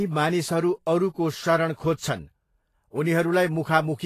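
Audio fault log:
Throughout, Vorbis compression: the speech carries a grainy, hissy sheen, with nothing above 14.2 kHz and consonant onsets smeared rather than crisp, damage that is plainly audible and fits a low bitrate near 32 kbps. The likely cause is an encoder starved of bits, so it drops the top band and quantises the remaining treble residue so coarsely that fine detail turns into noise of similar energy, roughening tones and blurring attacks.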